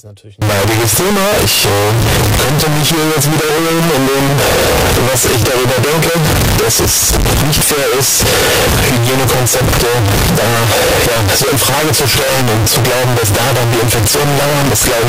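Speech, where from 0.42 s onward the 16-bit samples were likely read with signed and unsigned mixed up. Each zero crossing then jumps across the full range, producing loud, harsh distortion that makes quiet stretches as loud as the rest.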